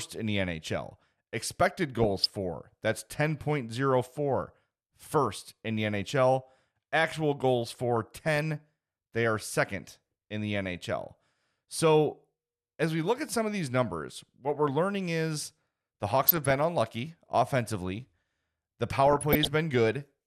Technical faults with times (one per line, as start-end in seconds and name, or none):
2.02-2.32 DAB burbling
7.96-8.43 DAB burbling
16.26-16.51 DAB burbling
19.07-19.47 DAB burbling